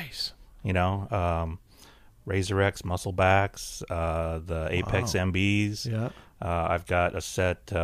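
No technical faults are audible anywhere in the recording.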